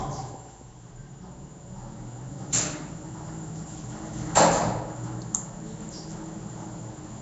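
Nellymoser compression, throughout: a rough, hissy, smeared halo and nothing above 7.7 kHz, likely from coarse block coding that fills starved bands with noise.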